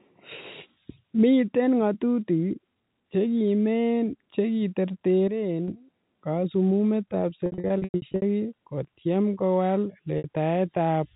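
Packet loss with pitch repetition hits this telephone-band speech, carried over G.711 A-law with its 4 kHz ceiling. From 7.46 to 8.22 s, about 460 ms of audio goes missing in scattered gaps, the longest about 100 ms, and the receiver fills each by repeating the last pitch period. This gives a held, buzzy stutter that fades toward silence in the longer gaps. A second 60 ms loss at 10.18 s leaves a brief buzzy hold.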